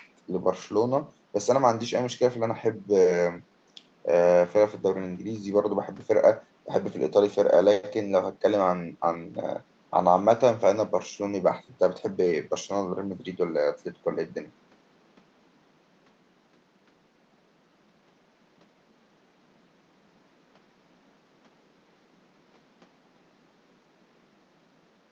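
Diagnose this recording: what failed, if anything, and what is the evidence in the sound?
Nothing in the recording points to a failure at any stage of the chain. The room's background noise sits about 36 dB below the speech, which is ordinary ambience picked up by the microphone rather than anything the system added.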